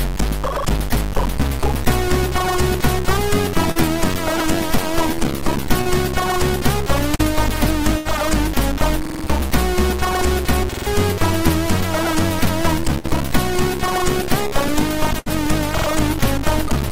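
Short concealed packet loss occurs at 3.71, 5.81 and 7.15 s. Each time about 40 ms failed to reach the decoder in time, and the receiver extended the preceding sound before blending back, giving a brief smear or wobble.

At 7.57 s a repeated buffer appears. The output device replayed a 46 ms block once when fresh data was late, which fits a 2048-sample buffer. It is heard as a hard-edged stutter, and about 50 ms of sound is skipped.

From 7.97 to 8.07 s, a burst of packet loss removes about 80 ms. The concealment holds and fades the last sound into a buzz or hiss, then resumes further along.

Repeated buffers recur at 9.05–9.24 s (four extra plays, roughly 200 ms lost) and 10.73–10.86 s (three, about 150 ms), both as rattling stutters.

Further bursts follow at 12.99–13.06 s (40 ms missing) and 15.19–15.28 s (80 ms).

A final repeated buffer at 15.78–15.87 s plays twice extra, losing about 100 ms.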